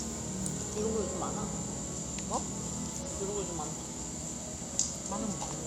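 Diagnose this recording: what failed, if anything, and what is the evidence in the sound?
A corrupt frame decoded at 3.01 to 3.05 s puts a brief glitch, roughly one frame long and peaking near -30 dBFS, into the sound. This is a codec-stage fault: flipped bits in that compressed frame were decoded regardless, so misread gains spread energy across wrong frequencies.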